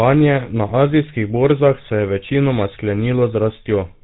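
From start to finish the speech carries plainly audible GSM full-rate codec damage: a buzzy, gravelly roughness from coarse, regularly spaced pulse excitation, consistent with a 13 kbps GSM coder. On a spectrogram, everything above 4 kHz is missing, cut along a flat ceiling.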